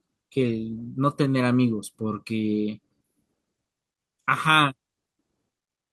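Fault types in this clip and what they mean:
No faults are audible here.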